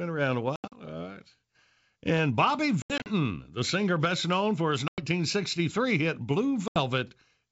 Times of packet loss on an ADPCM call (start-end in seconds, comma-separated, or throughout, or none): 0.56-0.80, 2.82-3.07, 4.88-5.03, 6.68-6.80